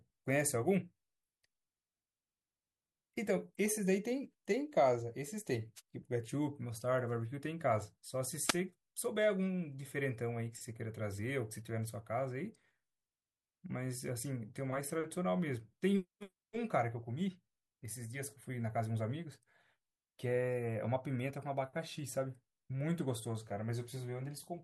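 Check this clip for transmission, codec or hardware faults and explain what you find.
There's a wireless-side problem here: two wireless microphone noise hits in the speech, at 5.76 to 5.81 s and 8.44 to 8.56 s. The FM radio link fades as reflected signals cancel, so receiver noise surges up, giving a brief swish of static each time.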